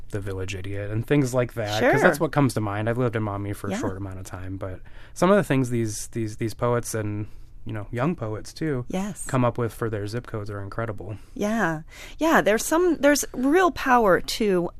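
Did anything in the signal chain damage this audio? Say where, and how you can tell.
No, nothing along the chain seems to have touched this speech recording, so there's no stage to point to and no damage to trace.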